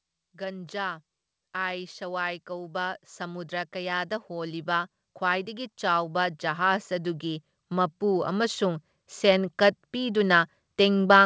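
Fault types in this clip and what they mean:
Automatic gain rising: gain control judged the input too quiet and ramped up about 17 dB from 0.32 to 10.23 s, lifting speech and background together.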